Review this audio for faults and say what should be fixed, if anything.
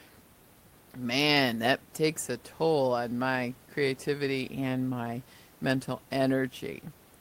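Nothing needs fixing here; no faults are present.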